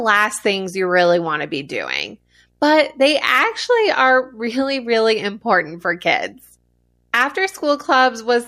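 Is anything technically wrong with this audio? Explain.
Yes. Video or display buzz runs through the whole speech clip, well below the voice: a buzz at 59.94 Hz with hash above it, plus a thin whine at 15.7 kHz. A screen or video cable is coupling into the audio. Unlike mains hum, the buzz sits at the picture's field rate and carries the line-rate tone.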